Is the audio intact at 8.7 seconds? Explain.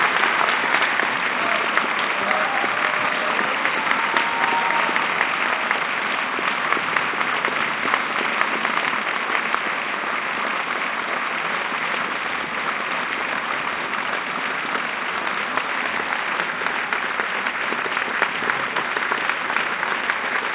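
Yes, the sound at 8.7 seconds is intact, with nothing at that moment beyond the call path's normal narrowband character, with no content above about 4 kHz.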